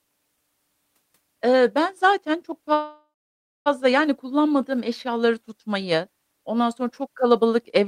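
At 2.73 s, right after "ben zaten çok", the speech stops and a buzzy tail of the last sound carries on and fades out. It then drops to silence for about 590 ms, and at 3.68 s the talker picks up again with "yani kullanmadığım eşyaları tutmayı". That's a call audio freeze, likely from packets stalling so the jitter buffer ran dry. About 925 ms got filled in and nothing was lost, so everything after it just runs that much later.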